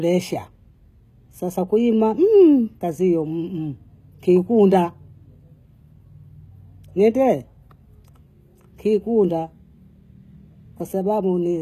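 From start to finish the speech carries plainly audible HE-AAC compression, likely from an encode at a bitrate around 20 kbps. The treble is rebuilt from copied lower bands, so s sounds turn gritty and lispy. A spectrogram shows patchy, duplicated-looking upper bands stopping sharply at 14.9 kHz.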